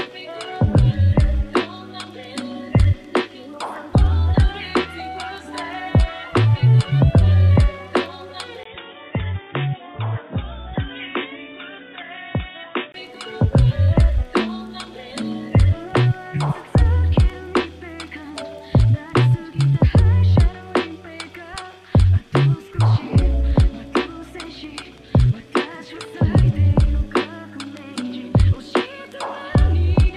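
At 8.63 s a gap of 20 ms opens, after which the sound turns dull and boxy and drops roughly 10 dB in level, with faint new background noise sitting well below it. Nothing above 3.8 kHz survives until 12.94 s, when full bandwidth returns. The likely cause is an input switched to a poorer device. A spectrogram shows a flat ceiling at 3.8 kHz across that span; the waveform shows a brief dropout, then a visibly smaller envelope.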